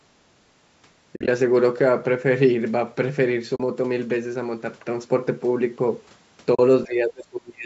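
At 1.16 to 1.28 s, AAC frames were lost and the decoder zeroed their spectrum in place of the missing data: about 90 ms gone, scattered over 120 ms, with the longest gap around 50 ms. The overlapping windows fade the sound out and back in, so it is heard as soft-edged dropouts. The same AAC frame loss with muting recurs as single 40 ms holes at 3.56 s and 6.55 s, each a brief, smooth gap.

From 6.85 s to the end at 7.65 s, the talker's level collapses in pieces by up to roughly 35 dB across most of that stretch. This is likely speech suppressed in double talk: with both sides talking at once, the echo canceller could not separate its own talker from the loudspeaker echo and pulled everything down. The voice dips and cuts out, and nothing is heard above 8 kHz.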